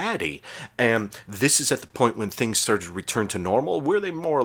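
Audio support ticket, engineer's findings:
Short stall from a late packet at 1.87–1.92 s, after "this is at the", and at 2.48–2.52 s. Jitter buffer ran dry; the last sound is held 27 and 18 ms, then resumes. Nothing is skipped, unlike packet loss.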